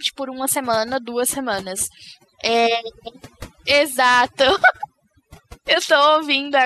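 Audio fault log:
Throughout: overdone noise removal. A noise reducer set far too aggressively suppresses any frequency band near its noise estimate, taking quieter speech detail with it, so the background drops and breaks up into twinkling specks.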